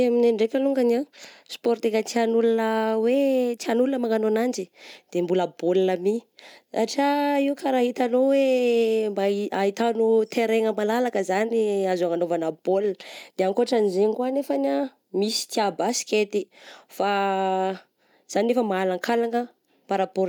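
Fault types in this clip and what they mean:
No faults found in the recording; the speech needs no fault entries.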